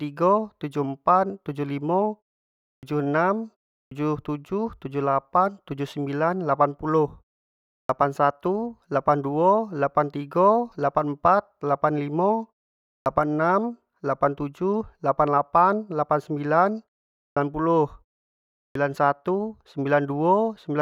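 Speech with a clipped start after a pause at 2.75, 3.84, 7.82, 12.99, 17.30 and 18.68 s. After each 0.36 to 0.72 s gap, the output wakes late and swallows 65 to 79 ms of onset. On a waveform or spectrogram, sound begins abruptly at full level, with no rising edge or initial consonant energy.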